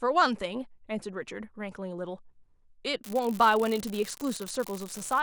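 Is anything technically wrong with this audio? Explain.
Yes. From 3.04 s to the end of the speech clip there is an unreliable data bit. One line carrying a sample bit is marginal. At random samples that bit flips, and each flip adds a spike of the same height, about -22 dBFS. These spikes are scattered through the signal. The result is a steady crackle or fizz layered over the speech. It does not stop between phrases. It carries on through the pauses too.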